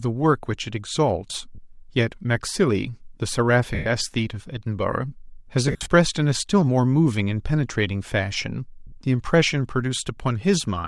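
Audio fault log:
throughout: Bluetooth LC3 compression. The speech has a breathy, grainy edge across the whole clip, and the damage is plainly audible. The likely cause is the LE Audio LC3 codec working in 10 ms frames. The texture fits a rate near 48 kbps. At that rate the coder drops much of the upper spectrum and fills the gaps with shaped noise. That noise fill gives consonants and vowels their hissy, rough sheen.
1.55–1.58 s, 3.75–3.86 s, 5.68–5.88 s, 8.87–8.92 s: lost LE Audio frames. The first gap lasts 30 ms, which fits three missing 10 ms frames. The others last 110 ms and 50 ms. Around 5.7 s, 140 ms of dropouts are scattered over 200 ms, the longest about 50 ms. In each gap the decoder repeats the last spectrum with random signs. The speech smears into noise, and in the longest gap fades toward silence.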